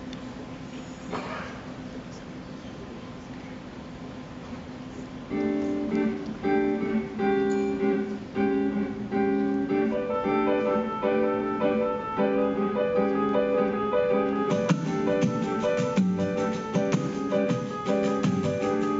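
No technical faults are audible anywhere in the recording.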